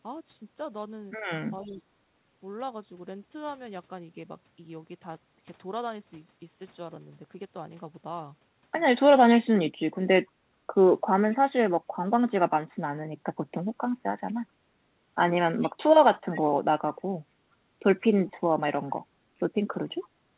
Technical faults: speech suppressed in double talk; echo leak

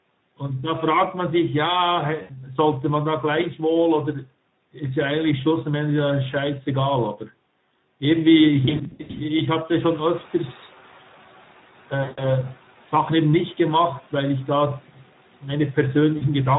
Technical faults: Speex codec; VoIP packet loss concealed by the speech codec; noise suppressor catching up

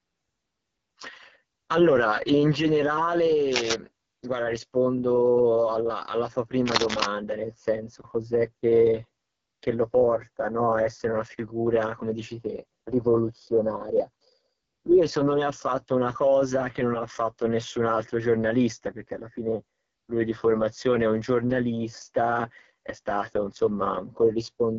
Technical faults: AMR wideband (HD Voice) codec

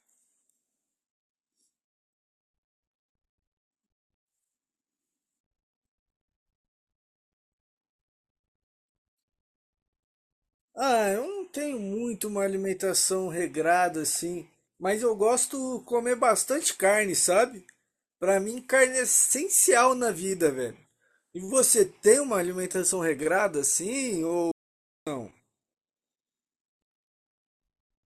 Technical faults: audio dropout to silence

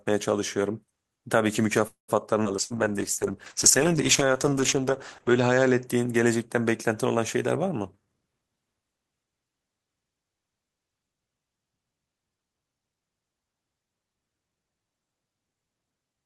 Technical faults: call audio freeze; skip ahead; call bitrate drop; burst of packet loss; jitter buffer slow-down; jitter buffer speed-up

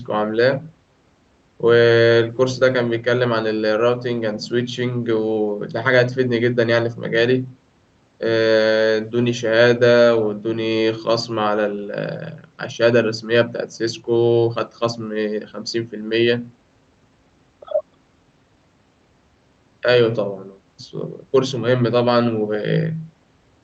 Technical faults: none

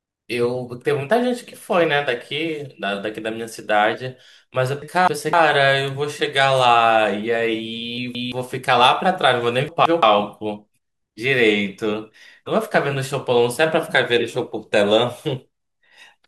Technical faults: frames out of order

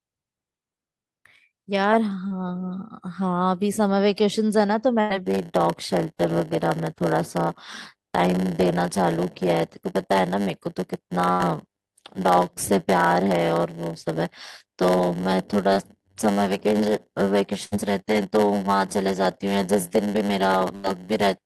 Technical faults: short concealed packet loss; burst of packet loss; block size mismatch (padded)

